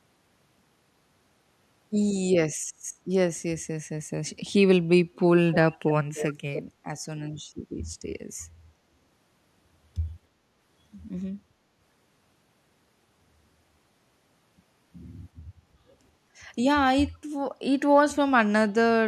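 Echo leak: an echo canceller at a loudspeaker end likely passed some of the far-end signal back, so a faint copy of the speech trails it by 300 ms, roughly 10 dB quieter. It comes in brief scraps at 5.52–5.56 s, 6.15–6.33 s and 6.54–6.62 s.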